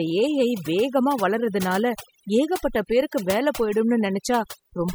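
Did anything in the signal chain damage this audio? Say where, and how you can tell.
Yes. Overdone noise removal in the call-processing stage affects the whole speech clip. Between phrases the background collapses to near silence dotted with twinkling specks, which happens when a suppressor set too hard pulls individual frequency bands down or off whenever they sit near its noise estimate, taking the quiet parts of the voice with them. A spectrogram would show scattered isolated blips in the gaps and ragged, hollowed-out harmonics under the voice.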